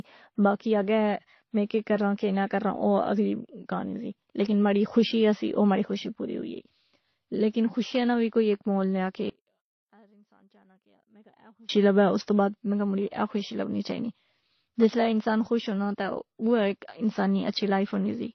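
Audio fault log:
throughout: transcoding between lossy codecs. The speech carries layered codec artefacts plus a dull, band-limited top, with nothing above 6.2 kHz. This likely comes from passing through MP3 at 36 kbit/s, then WMA at 96 kbit/s, then HE-AAC at 24 kbit/s. Each stage compounds the previous damage.
9.30–11.69 s: one channel inverted. After "ایک مول نیا کہ" the speech drops by about 33 dB and turns faint until "لبے اس تو بعد". The likely cause is one stereo channel flipped in polarity. Summed to mono, the centred voice cancels almost completely.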